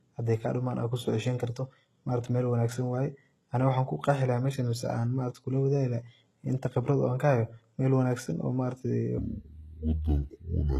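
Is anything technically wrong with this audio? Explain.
Yes, there are two faults.

Throughout, the speech has gritty, lispy sibilants and a synthetic-sounding top end that stops at 12.3 kHz. This is likely HE-AAC compression at a very low bitrate, near 16 kbps. The treble is rebuilt from copied lower bands rather than coded, so its harmonics don't match the real ones.

From 9.18 s to the end, a section at the wrong speed plays at 0.56 times normal. Speed and pitch drop together, about ten semitones, so the speech turns deep and dragging. This is likely a playback or editing step using the wrong clock.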